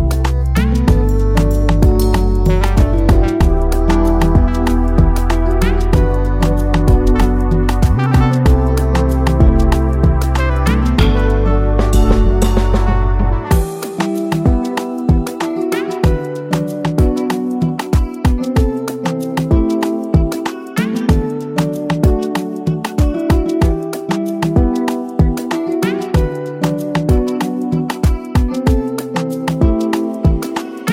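No technical faults are audible.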